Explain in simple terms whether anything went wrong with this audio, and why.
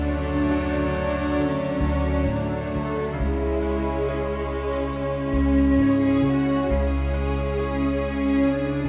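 Nothing went wrong here; the audio just has that narrow, phone-call sound with nothing above 4 kHz, which is what you'd expect from a normal call codec like G.711 mu-law.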